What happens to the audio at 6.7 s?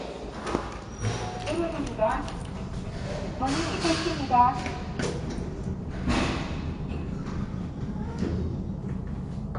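At 6.7 s the sound is dull and smeared with a fizzy, warbling texture and nothing above 10.1 kHz, likely AAC compression throughout, consistent with roughly 32 kbps.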